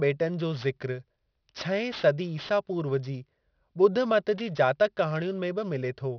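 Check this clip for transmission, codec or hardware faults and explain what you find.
One fault runs through the whole speech clip: aliasing. The audio fits a drop from 44.1 kHz to 11 kHz without an anti-alias filter, so content above 5.5 kHz folds back below it, roughly 20 dB under the speech. Sibilants sound gritty and metallic.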